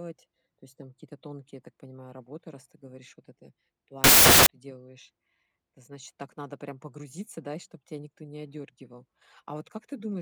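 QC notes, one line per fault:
4.04–4.46 s, samples built from the wrong bytes: after "ты говоришь вот это" the speech turns to loud, harsh broadband noise for about 0.42 s until "ты делаешь". Byte order or alignment slips, so fast-varying low bits dominate each sample value.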